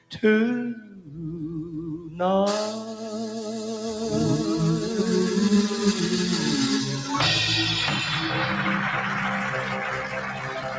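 Across the whole clip, which has nothing above 8 kHz as expected from call microphone processing, a noise suppressor applied to music or sounds mistakes sustained content for noise. It rides the level down by around 10 dB, so held sound pumps and thins while attacks pass through.

Sound cut by the noise suppressor shows up as deeper dips:
0.00–0.23 s, about 14 dB
0.75–1.20 s, about 13 dB
1.98–2.20 s, about 6 dB
9.63–9.78 s, about 5 dB
9.96 s to the end, about 8 dB

In each of these, steady or decaying material sinks or its tail is clipped short.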